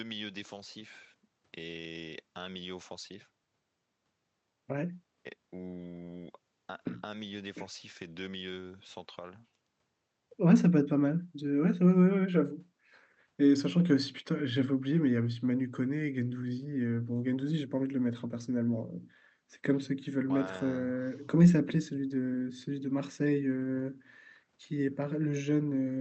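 No faults are audible in the speech, which has come through a call codec whose top end stops at about 8 kHz.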